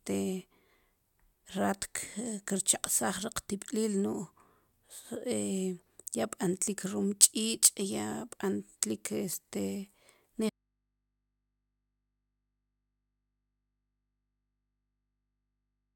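At 10.50 s the speech cuts off abruptly, not as a pause or a fade. From there to the end of the clip only a low mains hum remains, sitting roughly 50 dB below the speech level. This is an audio dropout to a faint residue: the wanted signal was lost while the path downstream stayed live, most likely leaving an open, unterminated input that picks up hum in place of the source.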